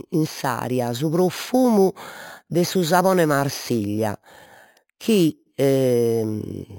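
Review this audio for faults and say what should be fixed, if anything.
Imaging from sample-and-hold upsampling runs through the whole speech clip. A bright, metallic fizz rides on the speech and rises and falls with it. The rate was raised by holding each sample, with no smoothing filter. Mirror copies of the spectrum were left behind. The lowest copy spans about 5.5 kHz to 11 kHz, which points to an original rate near 11 kHz. It sits about 19 dB below the speech. It moves opposite to the pitch. To prevent it, upsample with a proper interpolating low-pass filter.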